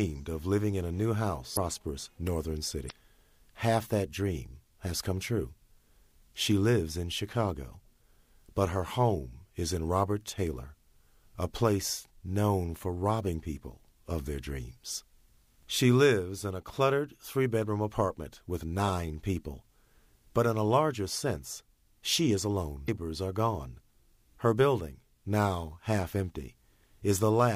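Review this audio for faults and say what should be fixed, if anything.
Damaged data in a compressed stream causes short glitches at 1.53–1.58 s, 2.86–2.91 s and 22.85–22.89 s. Corrupted bytes make the decoder misread frames and lose sync. Each event shows as a brief broadband vertical smear on a spectrogram and an abrupt waveform discontinuity. Re-fetch or re-encode from an intact source and verify file checksums.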